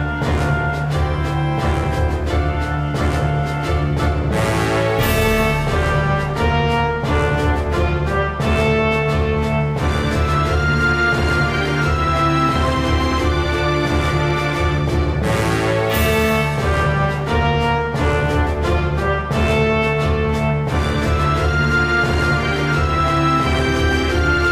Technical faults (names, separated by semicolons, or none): none